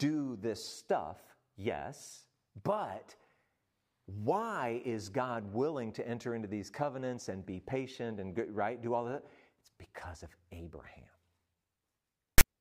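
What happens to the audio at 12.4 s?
File tags played as audio, from 12.38 to 12.41 s. A block of text metadata stored in the file is being decoded as if it were sound samples, so the character bytes become waveform values. Because text bytes cluster in a narrow range, the result is a brief, loud rasp pushed off-centre to one side of zero, switching on and off with hard edges like a sudden burst of static lasting about 30 ms.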